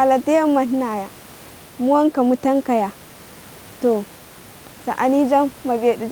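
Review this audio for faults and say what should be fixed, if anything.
Nothing here needs fixing; there's just a bit of room noise sitting about 26 dB under the speech, which is part of the recording itself and not a system fault.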